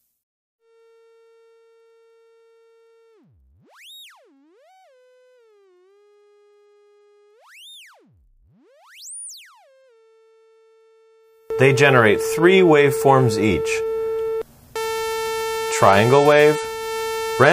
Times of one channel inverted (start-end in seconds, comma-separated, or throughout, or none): 0.00-11.50